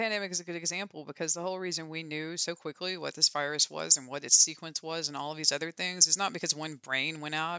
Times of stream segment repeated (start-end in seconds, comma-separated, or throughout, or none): none